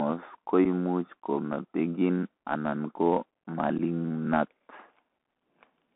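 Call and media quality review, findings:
Bluetooth CVSD headset codec, throughout: audio limited to roughly 250 Hz to 3.4 kHz, with granular hiss under speech and scratchy s sounds, which fits a 64 kbps CVSD link. The one-bit delta stepper lags fast, loud high content, causing plainly audible distortion.

Unconcealed Bluetooth headset packet loss at 0.65 s and 3.78 s: each is an abrupt hole of about 7.5 ms, roughly one packet's worth, filled with silence or an idle pattern instead of concealment. Speech then resumes briefly quieter as the CVSD step size rebuilds.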